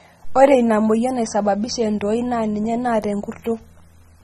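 Throughout the speech, the top end is missing: nothing sounds above 12.6 kHz, leaving the audio dull and smeared, with a warbling, fizzy texture on sustained sounds and sibilants that is plainly audible. The likely cause is AAC compression at a low bitrate, which fits AAC-LC at roughly 24 kbps. The encoder lowers its cut-off and quantises the remaining frequency lines coarsely, so gaps and substitute noise appear in the spectrum.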